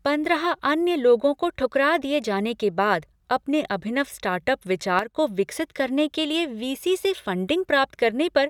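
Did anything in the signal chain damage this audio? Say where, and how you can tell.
Yes. There is a sudden gain jump in the digital processing. At 4.99 s the speech drops by about 7 dB in a single step. It stays down until 5.16 s, then returns. The background noise falls and recovers with the speech. That rules out a change at the microphone or in the talker. The step has no ramp, so the gain changed between adjacent samples. The cause is likely a gain setting or bit shift applied without smoothing.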